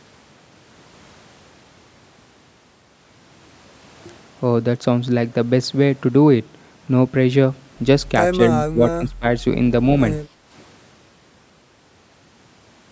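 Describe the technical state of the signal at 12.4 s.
At 12.4 s the speech signal is intact, carrying only the ordinary call microphone processing with its band ending at 8 kHz.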